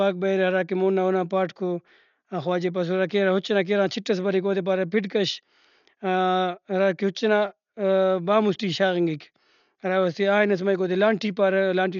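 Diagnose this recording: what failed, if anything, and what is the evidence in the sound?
The failure is at the codec stage, throughout the speech. Nothing reaches above 6.9 kHz, so the sound is dull from start to finish. The damage is heavy. A rough, fluttering grain clings to voiced sounds. The likely cause is Dolby Digital compression at a low bitrate, around 48 kbps. At that rate the encoder cuts the bandwidth. It leaves many frequency lines without mantissa bits. The decoder fills those gaps with dither noise, which produces the flutter.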